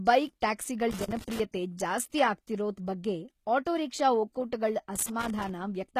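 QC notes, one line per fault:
Throughout: HE-AAC compression, plainly audible. The treble sounds rebuilt, not recorded, with nothing above 14.9 kHz. The upper band is likely synthesised from copied lower bands under a coarse envelope, so its harmonics do not line up with the body of the speech. This fits a low bitrate around 20 kbps.
0.91 to 1.40 s and 4.95 to 5.49 s: loose connector crackle. Two irregular bursts of crackle and scratching break into the speech. A contact that keeps making and breaking chops the signal into fragments, and any DC on the line turns each break into a pop.
1.24 s: pre-echo. A short wash of hiss about 34 ms long comes just before an attack and softens its onset. The codec spread quantisation noise sized for the loud transient across the whole block, so it fills the quiet moment ahead of it.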